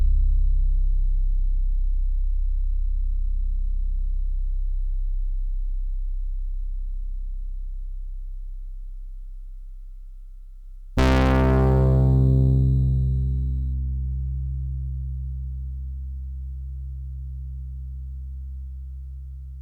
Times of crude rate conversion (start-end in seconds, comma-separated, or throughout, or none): 0.00-13.73